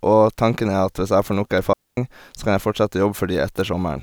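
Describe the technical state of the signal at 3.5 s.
At 3.5 s the speech signal is intact, with no dropout, clipping, glitch or other fault at that point.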